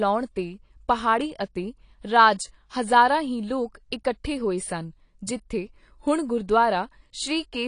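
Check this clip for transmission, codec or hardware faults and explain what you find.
One codec fault runs through the whole recording. From start to finish the speech sounds dull and smeared, with nothing above about 10.2 kHz and a warbling, fizzy texture on sibilants and held sounds. The likely cause is AAC compression, here AAC-LC, at a bitrate the sound suggests is near 32 kbps. Starved of bits, the encoder lowers its cut-off and coarsely quantises the frequency lines, so fine detail becomes smeared and the top end is discarded.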